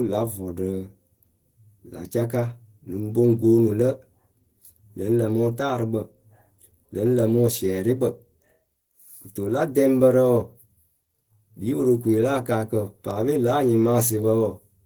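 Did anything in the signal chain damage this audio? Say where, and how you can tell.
Yes, at the codec stage: Opus compression throughout, likely at a low rate around 16 kbps in hybrid mode. The speech sounds hoarse and grainy, with noise-filled bands up to 20.2 kHz on a spectrogram.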